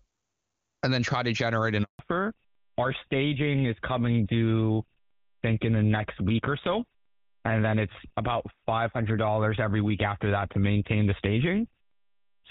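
At 1.83 s the speech breaks off in a 160 ms handover gap. While the call was passed between networks, no speech frames arrived. The sound fades within tens of milliseconds and stays silent until 1.99 s. A waveform shows a flat line there, and a spectrogram shows an empty vertical strip.

From 1.99 s to the end, the call suffers a fallback to narrowband. Before the gap, the AMR wideband (HD Voice) codec is clean and fills the spectrum to about 7 kHz, which fits its highest rate. Afterwards, nothing survives above 4 kHz, pointing to GSM full rate. The speech sounds duller and rougher, and a spectrogram shows a hard ceiling at 4 kHz.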